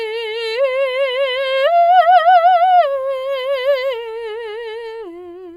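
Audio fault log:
The music signal holds steady, with no audible technical disturbance at any point.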